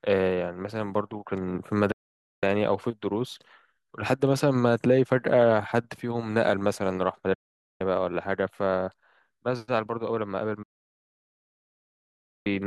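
Digital broadcast dropouts mute the speech at 1.91–2.43 s, 7.34–7.81 s and 10.63–12.47 s. The receiver stopped getting valid frames and silenced its output until good ones returned. Each cut closes in an 8 ms fade, leaving flat-line gaps in the waveform and blank columns across the spectrogram.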